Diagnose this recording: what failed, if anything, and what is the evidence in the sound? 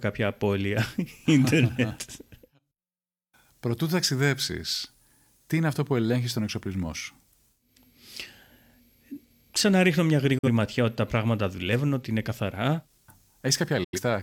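Digital broadcast dropout at 10.38–10.48 s and again at 13.84–13.99 s. The failure sits in reception and decoding. The speech fades out over about 8 ms into silence, first between "ξαναρίχνω μια" and "ματιά ότι τα πράγματα", then in a longer hole near the end. The receiver lost frames or found them corrupt and muted until clean ones arrived. The gaps of about 43 ms and 85 ms fit one and two lost frames, and that audio is gone.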